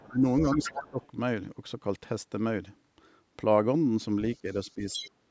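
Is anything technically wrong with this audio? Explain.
Yes. Two kinds of fault occur, both at the start and near the end.

Speech suppressed in double talk: the speech dips or drops out from 0.0 to 0.24 s, 0.54 to 0.99 s, 4.42 to 4.48 s and 4.66 s to the end. The cuts range from a fall of about 10 dB to near-silence of about 40 dB. The likely cause is an echo canceller that, with both sides talking, turned the local talker down along with the echo.

Other side's voice leaking through: a second voice sounds from 0.43 to 1.08 s and from 4.94 to 5.05 s, only about 10 dB under the main speech, with a faint brief trace at 4.34 to 4.39 s. This is likely loudspeaker playback that the echo canceller failed to remove from the microphone. The call's normal microphone processing limits the audio to below 8 kHz.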